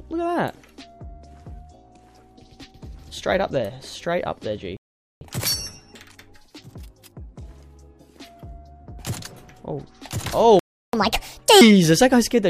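At 4.77 s the sound cuts to silence mid-flow for about 0.44 s, then carries on. This is a playback stall: the player likely ran out of buffered data or had its thread blocked, so output halted until it recovered.

From 5.21 s to 8.21 s everything runs slightly fast and sharp, about 1.1 times normal speed and roughly a semitone and a half higher, before settling back. This is catch-up at higher speed: the player resampled its backlog to win back the time lost in the gap.

A second playback stall at 10.59 s leaves about 0.34 s of silence before the sound carries on. The player was likely starved of data or blocked again.

From 10.93 s to 11.61 s comes a much more abrupt catch-up at higher speed. The sound rushes at 1.5 times speed, shifted up by around seven semitones, as the player compresses the shorter backlog into a brief, strongly chipmunk-like burst.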